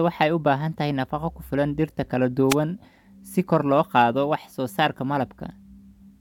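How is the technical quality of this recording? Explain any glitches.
There's one glitch: a wireless microphone noise hit from 2.49 to 2.55 s, a brief swish of static as the FM radio link faded and receiver noise broke through the speech.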